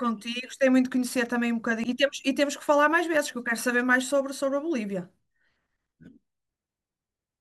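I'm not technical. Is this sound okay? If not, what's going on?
No. At 1.84 s there is a brief burst of noise, like a chirp or blip, cutting into the speech. That is damaged data in a compressed stream. A bit of the stored file was corrupted. The player misread it and then recovered.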